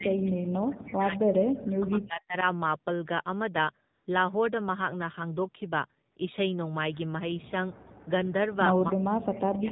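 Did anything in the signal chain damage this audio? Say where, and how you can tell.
Yes. At the codec stage, the whole clip carries AMR narrowband mobile codec damage at 7.4 kbps. Nothing above 4 kHz survives, and the speech has a buzzy, synthetic edge from pulse-excited vocal-tract modelling. That sets it apart from a plain low-pass filter, which would dull the sound without adding that synthetic quality.

In call processing, from 0.0 to 2.36 s and again from 8.93 s to the end, the speech drops in pieces by about 40 dB, adding up to roughly 2 s and 0.7 s. The likely cause is speech suppressed in double talk by the echo canceller. The drops are deep and come in pieces rather than as a smooth fade, which is unlike automatic gain control riding the level.

In the network stage, AMR comfort noise replaces the real background at 3.94 to 4.06 s (120 ms) and 6.12 to 6.16 s (40 ms). A smooth, steady synthetic hiss switches in where speech frames stopped. 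That is not packet-loss concealment, which would repeat or smear the preceding sound.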